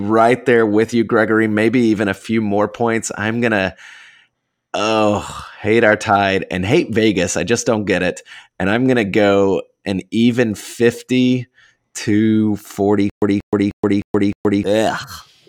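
Right near the end, from about 13.10 to 14.63 s, the speech breaks into a stutter with silent gaps. A short chunk of about 184 ms plays, then roughly 123 ms of dead digital silence, and that same chunk comes back every 307 ms or so, five times over. It's likely the player stalled and kept replaying its last buffered fragment before running dry, so whatever should have played in that stretch is simply gone.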